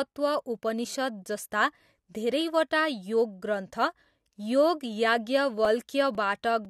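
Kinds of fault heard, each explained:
Periodic USB or driver dropouts: between 5.65 and 6.65 s, a few milliseconds of speech vanish into silence every 0.5 s, giving about three evenly spaced ticks. The fixed spacing marks a driver or bus stall, not random network packet loss or isolated clicks.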